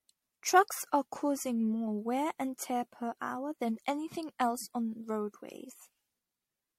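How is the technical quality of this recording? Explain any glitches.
The quality is poor throughout, due to generation loss. The speech sounds swirly and hollow from start to finish. Consonant attacks are smeared, and nothing remains above 16.4 kHz. The damage is heavier than one pass at a modest bitrate would cause. The likely cause is repeated MP3 encoding, around seven times, at rates near 65 kbit/s. Each new pass requantises on a shifted frame grid. So the noise and spectral holes stack up.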